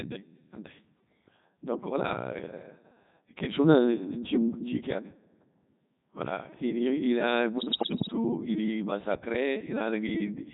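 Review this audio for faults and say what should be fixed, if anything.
The whole recording passes through the Codec 2 vocoder at 3.2 kbit/s. Only pitch, voicing, energy and spectral envelope survive, so sine-wave resynthesis makes the speech sound heavily robotic and buzzy. Prevention: carry the speech on a waveform codec at a higher bitrate rather than a parametric vocoder.

From 7.58 to 8.12 s, bit errors on digital voice radio, roughly one bit in ten, corrupt the frame parameters. Pitch, level and timbre jump erratically into warbling gibberish. Prevention: improve link margin or add stronger forward error correction so corrupted frames are repaired or muted.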